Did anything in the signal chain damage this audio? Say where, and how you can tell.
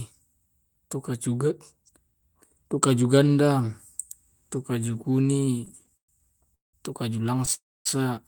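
Yes, it's the network side, with the receiver's jitter buffer running dry. From 5.17 to 6.10 s, just before "tu kaju", you get repeated stalls (stutter): 17 little hitches adding up to about 276 ms of filled-in sound, the longest 119 ms, so roughly 30% of that stretch is concealment. Nothing is actually lost. The receiver keeps stretching the last bit of sound while it waits for late packets, which is why it drags and stammers.

Then there are two call audio freezes. The first runs from 6.54 to 6.75 s, right before "tu kaju": about 189 ms of held sound that fades into roughly 160 ms of silence. The second runs from 7.53 to 7.87 s, just after "tu kaju": about 321 ms held, with around 250 ms of that silent. Afterwards the audio picks up exactly where it stopped, so each gap is inserted time rather than a cut. Packets were likely held up in transit.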